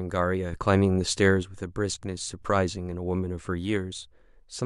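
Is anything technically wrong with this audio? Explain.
Yes. From 0.53 to 1.43 s the speech and its background noise jump up together by about 6 dB, then return, a sudden gain jump. The likely cause is a digital gain change applied between adjacent samples with no ramp to smooth the transition.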